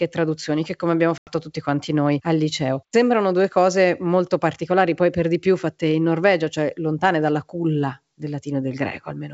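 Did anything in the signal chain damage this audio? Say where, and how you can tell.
Yes, there is packet loss on the ADPCM call, at the network stage. From 1.18 to 1.32 s, between "traduzioni che come abbiamo" and "tutti quanti noi al", about 90 ms (roughly ten packets) drops to silence. The waveform shows a flat, square-edged gap, and the spectrogram shows a blank vertical band across the full wideband range. The G.722 decoder's adaptive predictor and step size then lag the sender's, so the audio resumes slightly distorted before settling.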